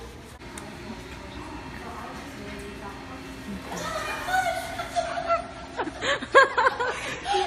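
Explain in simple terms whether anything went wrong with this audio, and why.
Yes, something goes wrong at 4.94 s: the adaptive stream switched to a lower bitrate and stays there to the end. The quality drops suddenly, with no gap. Compression artefacts pick up, and the treble above about 11.7 kHz disappears, likely because the connection slowed.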